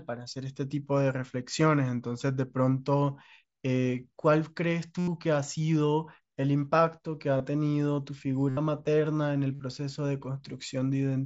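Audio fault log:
4.98–9.60 s, concealed Bluetooth headset packet loss: four gaps at 4.98–5.08, 7.38–7.40, 8.49–8.57 and 9.54–9.60 s, lasting 90, 23, 75 and 53 ms, were filled by repeating recent waveform. The longer gaps become a steady buzzy tone at full level, with a slight warble as real audio resumes.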